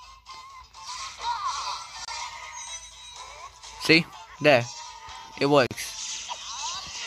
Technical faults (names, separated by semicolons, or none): gap at a join of encoded pieces